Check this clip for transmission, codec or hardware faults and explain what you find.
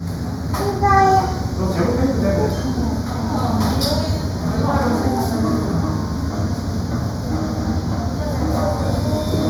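One fault runs through the whole clip: channel delay (comb filtering). One channel trails the other by a fraction of a millisecond, and summing to mono cancels shared content at evenly spaced frequencies, first around 3 kHz. The sound turns hollow and phasey. The notches stay fixed, unlike a sweeping flanger or a single equaliser dip.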